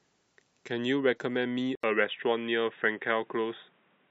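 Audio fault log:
1.75–4.11 s, input switched to a poorer device: after a gap of 80 ms the speech turns dull and boxy, with nothing above 3.8 kHz, and a new, different background noise appears roughly 40 dB below the speech while the overall level stays about the same. The sudden change in bandwidth and tone, with no change in loudness, is likely the recording moving to a lower-grade microphone or a headset's call profile partway through.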